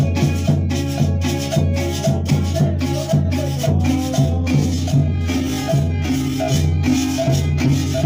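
At 4.16 s the pace drops abruptly and stays slow to the end: a time-stretched section running at roughly two-thirds speed (0.673×) with the pitch unchanged. The likely cause is software stretching the audio to fill a length by repeating short pieces, which makes it drag. On a spectrogram, harmonic lines keep their frequencies but events spread wider in time; the waveform shows drawn-out envelopes.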